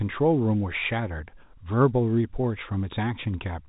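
No faults are audible; the speech sits within the ordinary telephone band of G.711 A-law coding, with nothing above about 3.8 kHz.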